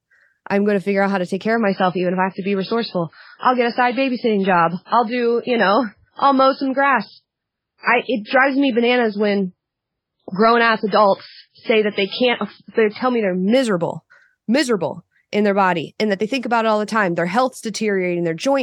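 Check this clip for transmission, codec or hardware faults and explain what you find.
One fault: an adaptive stream at a lower bitrate, from 1.54 s to 13.54 s. Quality drops abruptly with no gap, consistent with a fall from about 128 to 16 kbit/s MP3. Nothing remains above 5.3 kHz, so the speech turns dull, with audible codec artefacts, until quality snaps back.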